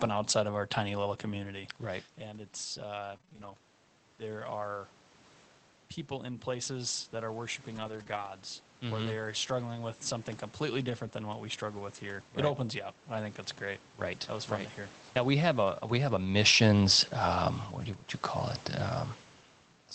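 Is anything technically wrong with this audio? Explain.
Yes, there are three kinds of packet-loss fault in this speech.

From 3.13 to 3.52 s there is repeated packet loss with a robotic sound. Five short gaps, none longer than 20 ms, are each patched by extending the previous sound, giving choppy, robotic speech rather than one clean smear.

Lost packets rebuilt from error correction occur at 7.76 to 8.02 s, just after "in places that are", then at 8.08 to 8.18 s and 9.04 s, and at 10.86 to 10.92 s, between "struggling with something completely" and "than what we struggle". A low-bitrate Opus copy sent in the next packet fills each loss, so nothing drops out, but those stretches sound rougher and noisier.

At 8.04 s there is a short concealed packet loss. A single 20 ms hole with no backup copy is bridged by continuing the last sound, leaving a brief smear or wobble instead of the grainy patches heard around it.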